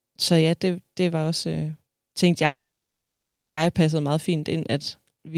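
From 2.45 to 3.59 s, a call audio freeze: speech stalls, fades into 1.02 s of silence, then resumes exactly where it stopped, unlike a dropout. Likely cause: a starved jitter buffer.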